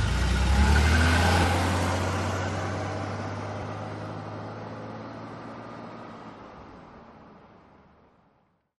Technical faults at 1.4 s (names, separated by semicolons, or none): damaged data in a compressed stream